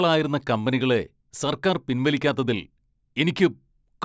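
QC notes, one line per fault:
No faults heard in playback.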